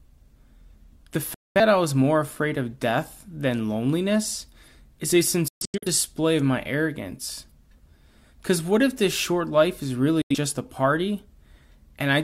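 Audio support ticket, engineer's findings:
Digital broadcast dropout: speech muted 1.34–1.60 s, 5.48–5.87 s (several short holes across about 0.34 s, longest 0.13 s), 10.22–10.35 s. Receiver muting on bad or missing frames, 3 ms fade; gap lengths fit whole frames of about 43 ms. Programme lost, not delayed.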